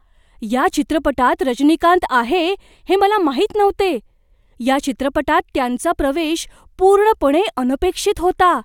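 No technical faults can be heard anywhere in this recording.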